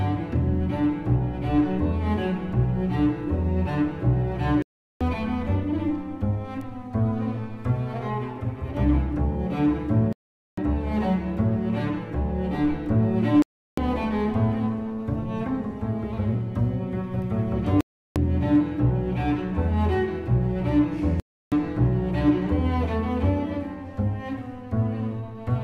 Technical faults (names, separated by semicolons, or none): digital broadcast dropout; bit error spike